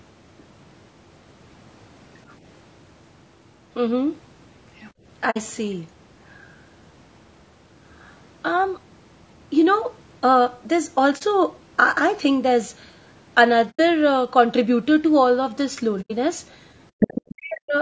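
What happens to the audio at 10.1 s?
At 10.1 s the voice is rough and grainy, with noise filling the gaps between pitch harmonics. This is low-delay AAC compression, present through the whole clip rather than at one moment. The sound fits AAC-ELD at about 32 kbps, likely the cause: its short frames resolve harmonics poorly at that rate. The steady texture sets it apart from packet loss, which leaves brief gaps or glitches.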